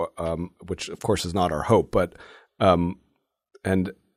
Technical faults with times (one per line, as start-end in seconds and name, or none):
none